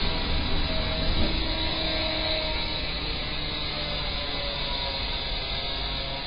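From start to finish the audio is dull and smeared, with nothing above 5.1 kHz and a fizzy, warbling texture in sustained sound. This is likely heavy AAC compression, AAC-LC at a bitrate pointing to about 16 kbps, which lowers the cut-off and leaves spectral holes.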